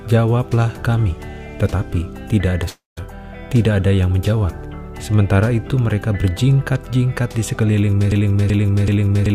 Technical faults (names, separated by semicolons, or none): long network dropout; broken-record loop